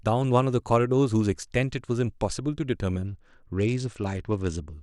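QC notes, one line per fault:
3.06–4.73 s, Bluetooth SBC bit pool drop: treble dulls and gritty noise rises as the encoder starves upper sub-bands, consistent with a bit pool falling to around 10.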